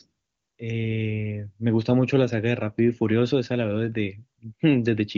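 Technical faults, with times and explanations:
Nothing stood out on listening to this speech clip.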